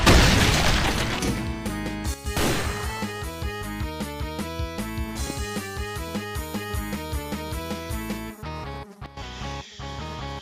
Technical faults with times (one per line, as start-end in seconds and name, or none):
2.14-2.26 sudden gain jump
9.06-9.17 sudden gain jump